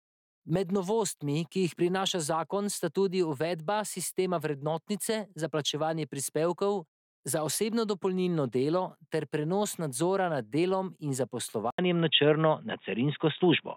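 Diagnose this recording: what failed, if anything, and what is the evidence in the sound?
After an 80 ms gap at 11.70 s, speech loses everything above 3.8 kHz, drops or jumps a few dB and gains a new noise floor. That points to a driver-level input switched to a poorer device, likely, rather than codec band-limiting.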